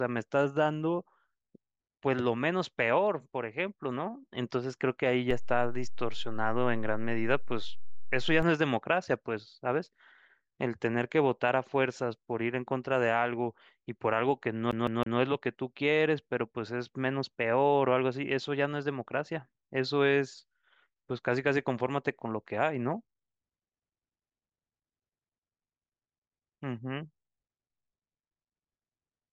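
Speech recording with two faults. A DC step at 5.31 s shifts the waveform's zero line with a low thump, and the offset holds until 8.43 s, showing as vertical low-frequency bursts on a spectrogram. From 14.71 to 15.19 s the audio sticks like a CD stuck on one turn, replaying the same 160 ms section three times with brief mutes, visible as identical repeating blocks.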